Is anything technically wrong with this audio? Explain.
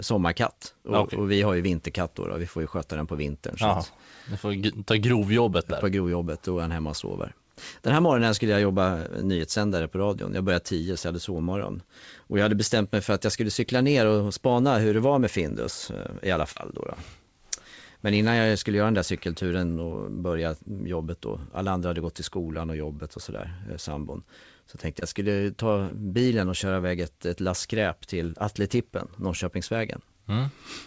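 Yes. There are two short concealed packet losses. At 16.52 to 16.58 s, just after "eh i alla", the speech briefly smears and wobbles, and at 25.00 to 25.03 s, just before "jag skulle ta bilen", there is a quick blur. In each case a stretch of the call, about 40 ms and then about 20 ms, arrived too late to decode. The receiver patched the gap by extending the preceding sound and then blended back into the real signal. The wideband call path tops out at 8 kHz.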